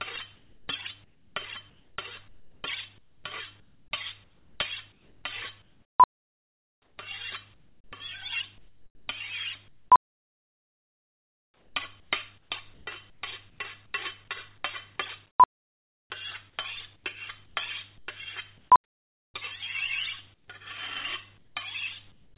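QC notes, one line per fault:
0.36–6.98 s and 9.68–19.34 s, sound chopped by the voice detector: the sender's detector likely toggled repeatedly, swapping about 3.8 s and 4.4 s of sound for comfort noise, so the audio stutters.
7.54–7.92, 8.58–9.08, 20.34–20.48, 21.38–21.56 and 22.12–22.36 s, sound dropped by the voice detector: the detector likely mistook quiet sound for background and stopped sending, so 0.1–0.4 s of sound becomes steady noise or near silence. Nothing is heard above 4 kHz, as expected for a narrowband G.711 call path.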